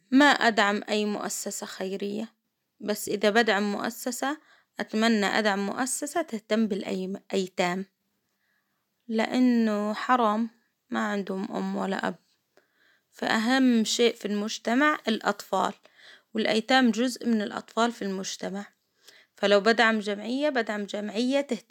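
No technical faults can be heard anywhere in this recording.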